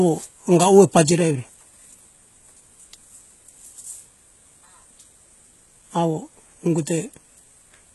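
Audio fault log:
throughout, HE-AAC compression: heavy coding damage, with treble that is bright but synthetic and gritty on sibilants, and nothing above 11.8 kHz. The likely cause is spectral band replication copying lower bands upward so harmonics misalign at the crossover, which fits a bitrate around 16 kbps.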